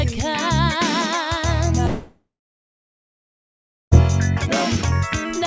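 From 1.86 s to 3.93 s the sound breaks off and is replaced by a synthetic continuation of its last moment, a buzzy tail that fades within a few tenths of a second and leaves about 1.63 s of silence. This is likely a long network dropout: roughly 2.06 s of audio never reached the receiver, its concealment stretched the final fragment until giving up, and playback resumes past the gap with that section lost. Content above 8 kHz is absent throughout, consistent with a G.722 call path.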